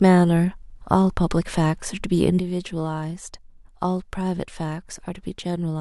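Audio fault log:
2.39 s to end, sudden gain jump: speech and background noise drop together by about 7 dB at once. Likely an unramped digital gain change.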